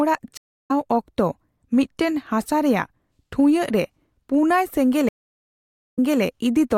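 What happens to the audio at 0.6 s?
The speech drops to silence for about a third of a second, from 0.37 to 0.71 s, then jumps roughly a fifth of a second ahead at "ᱚᱠᱛᱚ ᱢᱤᱫᱴᱟᱝ ᱦᱟᱥᱟ ᱨᱮᱭᱟᱜ": a stream reconnect, where the player lost its connection and restarted decoding mid-stream.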